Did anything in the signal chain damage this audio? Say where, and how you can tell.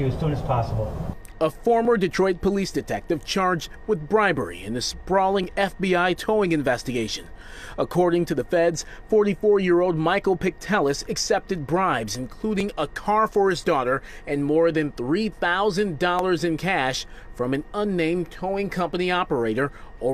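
Yes: buffer stage, likely clock drift buffer slips. Mismatched clocks, a few hundred ppm apart, force dropped or repeated sample blocks, heard as regular clicks every 3.59 s from 1.85 to 19.77 s.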